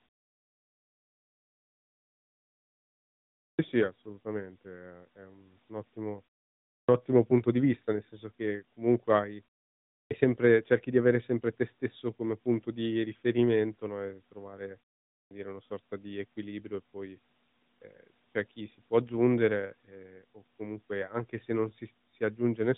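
Speech resumes abruptly at 3.53 s, again at 6.82 s just before "ottimo punto di vista", at 10.05 s before "sempre cerchi di avere", and at 15.24 s before "dire una sorta di". Each time the opening sounds are missing, about 58, 65, 58 and 68 ms respectively. This is a clipped start after a pause: the playback device sleeps during silence and, on waking, swallows the first fraction of the next sound.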